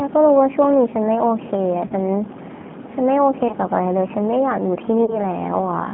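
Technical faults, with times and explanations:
Throughout, G.729 codec: the speech sounds slightly rough and synthetic, confined to a narrow line band of about 150 Hz to 3.5 kHz with plainly audible damage, because the 8 kbit/s coder rebuilds each 10 ms frame from a vocal tract filter, pitch predictor and a few pulses.
1.87–1.92 s, 3.48–3.55 s and 5.05–5.20 s, VoIP packet loss concealed by the speech codec: the sound smears into a brief buzzy tone or coloured noise that fades, and stays weak or distorted after each gap. A packet of about 30 ms went missing each time. The decoder extended its last pitch and filter at falling gain. Since later frames build on that guess, the recovery lags.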